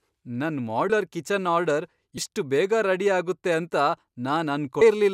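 Compressed frames skipped at 0.89 s, 2.17 s and 4.81 s in this speech clip: the audio jumps ahead by about 100 ms, 100 ms, then 200 ms, fitting whole 26.1 ms frames going missing, each join a brief smeared blip rather than a click.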